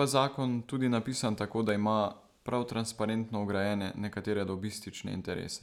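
Right after "zakon tudi napisan tako", from 1.69 to 3.52 s, you get CD scratch ticks: ten regular clicks, about five a second, each a few milliseconds at most. A blemish wipes out more data per disc turn than error correction can rebuild, so the player patches or mutes those samples.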